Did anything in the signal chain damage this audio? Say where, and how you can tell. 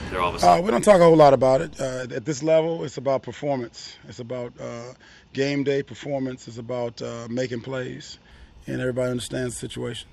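Yes: an input switched to a poorer device between 2.03 s and 8.31 s, at the capture stage where the driver selects the input device. Across that span the band stops abruptly at 7.6 kHz and a faint new noise floor appears, roughly 50 dB below the signal, while the level hardly moves. There is no gap at either switch, so the change is likely a hand-over to a narrower, noisier microphone path and back.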